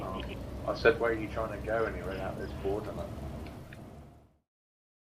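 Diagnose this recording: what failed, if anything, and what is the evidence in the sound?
Nothing failed at any stage; the only level change is a smooth fade-out beginning around 3 s and reaching silence at 4.51 s, an ordinary editing move with no click or hard edge.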